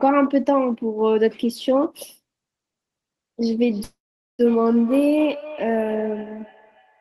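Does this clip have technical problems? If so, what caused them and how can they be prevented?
Yes. From 3.66 s to the end there is feedback echo between two devices: speech returns roughly every third of a second, about 17 dB down, as repeating ghost bands on a spectrogram. Muting one device's speaker or microphone prevents it.

A call audio freeze at 3.83–4.41 s, likely from delayed packets, appears as a fading smear, then 450 ms of flat waveform, with nothing lost. A steadier network connection prevents it.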